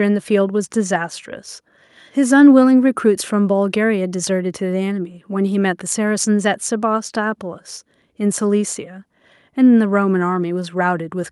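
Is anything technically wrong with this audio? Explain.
No, nothing technically wrong is audible; the speech has the slightly narrowed top end and light coding texture expected of a normal call path.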